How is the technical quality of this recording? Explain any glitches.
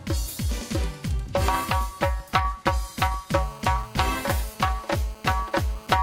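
The main problem is a GSM phone buzz that kicks in at 3.35 s and runs to 5.96 s. A 2G handset close to the gear was on a call, and its radio bursts, repeating about 217 times a second, got rectified by the audio circuitry into an audible signal. You hear it as a hard, raspy buzz at 217 Hz, full of harmonics and unrelated to the sound underneath, holding steady at about 21 dB below the signal.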